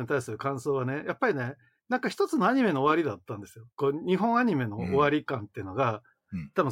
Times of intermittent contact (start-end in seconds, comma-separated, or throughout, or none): none